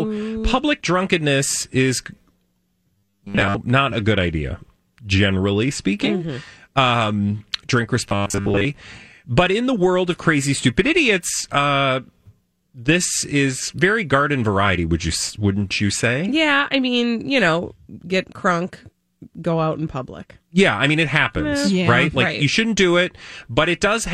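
Robotic sound from repeated short buffers occurs at 2.98 to 3.58 s, just before "not a good idea", and again at 8.09 to 8.65 s. Each time the speech hardens into a rigid metallic buzz at 100 Hz, likely because audio arrived too seldom and a 10 ms fragment was looped, covering most of the real sound.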